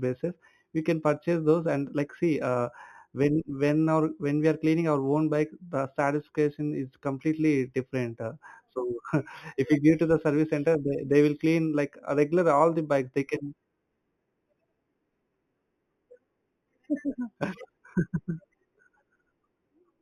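A speech recording carries imaging from linear upsampling throughout: audio at 8 kHz was raised to 48 kHz by joining samples with straight lines. That weak filter dulls the top of the 4 kHz band and leaves a faint mirrored copy between 4 and 8 kHz, roughly 35 dB down, heard as a light metallic shimmer on sibilants. A spectrogram shows the speech reflected upward about 4 kHz; zoomed waveforms show straight segments kinking every six samples.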